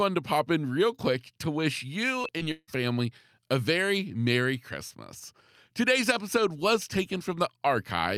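Just after "real quick to wish", at 2.21 s and again at 2.38 s, short concealed packet loss leaves brief smears. Each time about 20 ms never arrived and was patched over.

From 2.51 to 2.70 s the sound turns into a fading buzz, then falls silent for about 50 ms before the speech resumes with a piece missing. A long network dropout is the likely cause.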